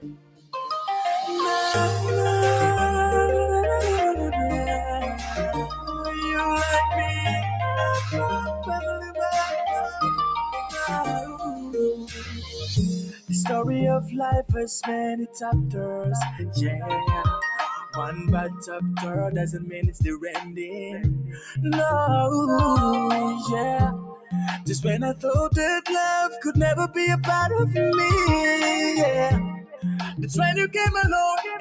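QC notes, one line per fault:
Throughout: noise suppressor applied to music or sounds. A speech-tuned suppressor is treating the sustained parts of this audio as noise, so the level keeps swinging by around 10 dB. Attacks push through while held tones and tails sag, giving a pumping, thinned-out feel.
0.0–0.53 s, 5.14–5.88 s, 8.56–9.18 s, 10.66–13.31 s, 18.11–21.58 s, 23.92–25.24 s, 26.32–26.96 s, 29.51–30.75 s: sound cut by the noise suppressor. In these stretches the suppressor clamps down harder on steady or decaying material, dipping it by anywhere from about 6 dB at 5.14 s to about 19 dB at the very start. The longest hits are around 10.66 and 18.11 s, where a good chunk of each span sinks. The call microphone processing itself is fine, with its top end stopping at 8 kHz.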